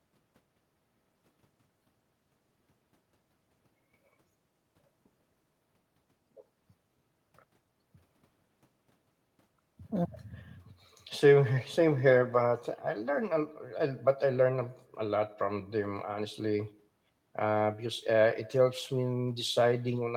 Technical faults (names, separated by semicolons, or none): none